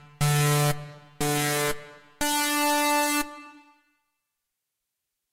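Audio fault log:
No faults heard anywhere in the sound.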